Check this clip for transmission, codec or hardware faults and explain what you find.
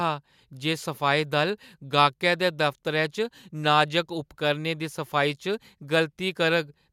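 No transmission, codec or hardware faults can be heard anywhere in this speech recording.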